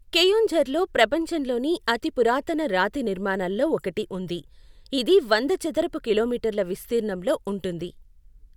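Listening to this speech recording, nothing stood out as a technical problem.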